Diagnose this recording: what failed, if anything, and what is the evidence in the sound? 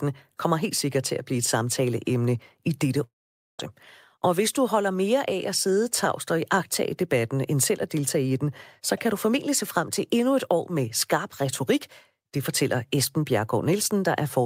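A long network dropout: after "blive et samtaleemne i", from 3.03 to 3.61 s, the speech becomes a fading buzz, then about half a second of near-silence, likely receiver concealment outlasting a network gap. Spectrogram: smeared harmonics darkening; waveform: amplitude collapses, then speech resumes.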